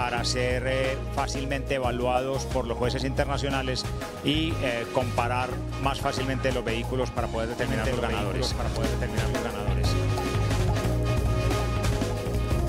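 At 7.59 s a doubled audio track begins, and it runs to the end. A second copy of the same sound enters abruptly and trails the original by about one and a half seconds. It sits roughly 5 dB lower. The copy is full-band and dry, with no decay or room colour. Each moment is heard twice, like a flat echo. The likely cause is a second, slower capture path mixed in alongside the first.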